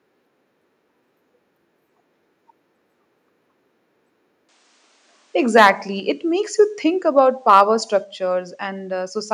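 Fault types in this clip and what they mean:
Input switched to a poorer device: At 4.49 s the sound changes character and stays that way to the end. The band narrows, so the top end turns duller. The level drops by a few decibels. A faint new background noise appears, well below the speech. There is no gap at the change. This is likely the system moving to another microphone or a headset's call profile.
Microphone overload: Two short bursts sound harsh and crackly. The first runs from 5.56 to 5.70 s, with peaks about 7 dB beyond the limit. The second runs from 7.49 to 7.62 s, about 3 dB over. In each, a small share of the samples is cut flat at the top. The likely cause is an input volume set too high, so the loudest syllables hit the converter's ceiling.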